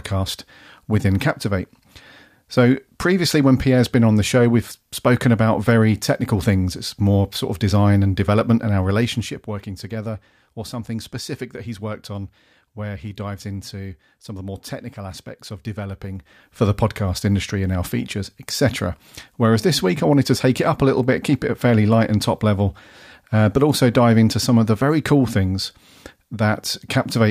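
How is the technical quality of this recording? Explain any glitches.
The recording has two short bursts of zipper noise where the level is moved. From 8.8 to 9.58 s, after "design and development and", the level drops by about 10 dB. From 16.08 to 16.62 s, after "more technical aspects of", it rises by about 10 dB. Each change comes in 1 dB steps, roughly fifteen to twenty per second, with no smoothing. Every step leaves a tiny click, heard as a fast ticking over the speech.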